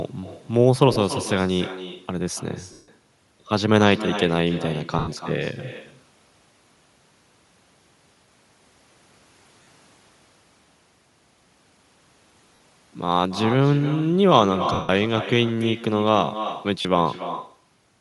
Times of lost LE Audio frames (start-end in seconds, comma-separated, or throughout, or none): 0.93-0.96, 2.73-2.88, 4.99-5.09, 9.63-9.67, 12.55-12.60, 14.73-14.89, 16.82-16.85